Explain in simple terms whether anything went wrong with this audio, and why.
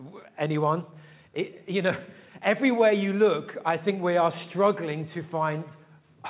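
Nothing went wrong here.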